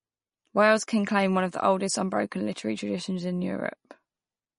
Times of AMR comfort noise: none

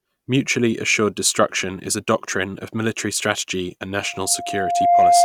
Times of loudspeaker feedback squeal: 4.03-5.24

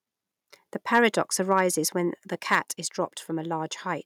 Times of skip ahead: none

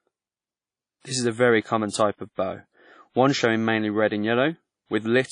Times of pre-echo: 1.00-1.05, 1.89-1.92, 2.35-2.38

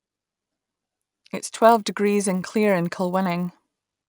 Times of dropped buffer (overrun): none

